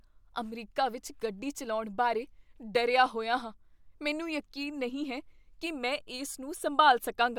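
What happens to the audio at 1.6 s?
Nothing goes wrong at 1.6 s; the speech runs through that moment intact, with no dropout, click, glitch or other fault.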